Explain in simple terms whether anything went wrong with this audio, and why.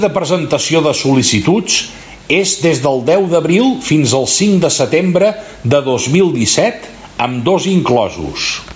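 Gain pumping runs through the whole clip. The likely cause is microphone gain set far too high, with a fast limiter pulling the level down on every loud sound and letting it back up in the gaps. Loud and soft parts end up squashed closer together.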